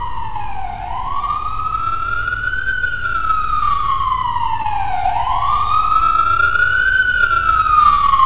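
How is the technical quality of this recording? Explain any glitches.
The recording carries one audible glitch, a brief concealed dropout, on top of a band-limited call-path sound in which nothing above 4 kHz is present, consistent with G.711 mu-law at 64 kbps.

Short concealed packet loss, 4.62 to 4.66 s: about 20 ms of audio failed to reach the decoder in time, and the receiver patched roughly 19 ms of that gap by extending the preceding sound, tonal or noise-like as appropriate, before crossfading back to the real signal. It comes across as a tiny smear or wobble in the sound at that point.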